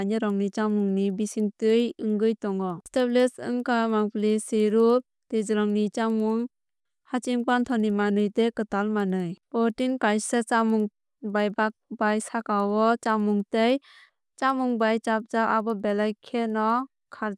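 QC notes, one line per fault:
Throughout: resampler restarted on every block. Faint ticks repeat evenly at 10 per second, once per 100 ms block, and only while speech is present. Each block's edges were converted without their true neighbours. Unlike dropouts, no audio goes missing, and the ticks never drift.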